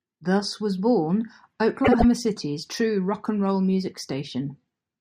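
Just after "was born", from about 1.84 to 2.05 s, the speech breaks into a brief garbled flutter. These are frames out of order: two adjacent blocks of about 72 ms each play swapped, which fits runs of three frames exchanged, and no time is lost.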